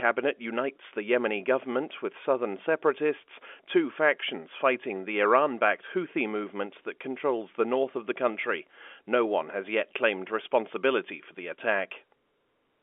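No technical faults can be heard anywhere in this speech recording. It carries the narrow band of G.711 telephone coding, roughly 300 Hz to 3.4 kHz, with at most a faint trace of the coding itself.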